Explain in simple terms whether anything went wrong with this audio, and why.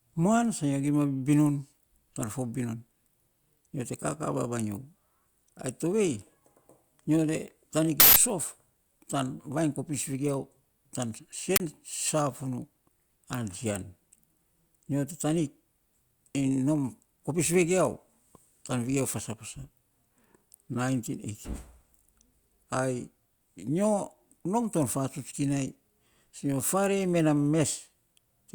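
Uninitialised buffer, at 8.0 to 8.16 s and again at 11.56 to 11.6 s. Both times, the speech is replaced by loud junk sound: a burst of harsh digital noise the first, longer time and a brief crack the second. A chunk of audio was played before anything was written into it, so leftover memory came out as sound.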